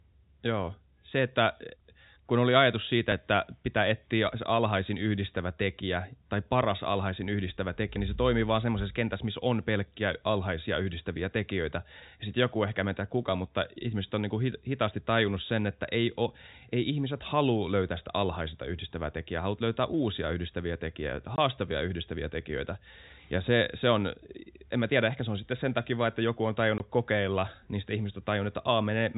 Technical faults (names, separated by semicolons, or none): dropped buffer (overrun); packet loss filled with silence